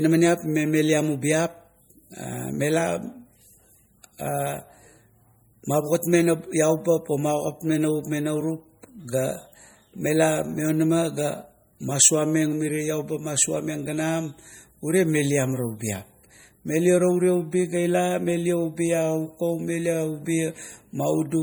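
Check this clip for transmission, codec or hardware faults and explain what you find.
One fault runs through the whole clip: plainly audible MP3 compression. It is likely an encoder short of bits, which fits a rate near 48 kbps. Weak frequency lines switch on and off between frames, so the speech sounds watery and swirly with smeared consonant onsets. A spectrogram shows flickering gaps in the upper bands and nothing above 20.9 kHz.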